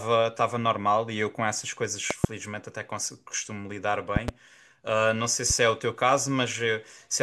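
Three bursts of loud pops cut through the speech. Between 2.11 and 2.27 s there's a sharp double pop, well above the speech at roughly 20 dB over it. A second pair follows at 4.16 to 4.31 s, a bit softer, and a single, milder pop lands at 5.50 to 5.53 s. The likely culprit is a voltage spike, from a connector, a switch or static, getting into the chain. The speech carries on underneath each pop.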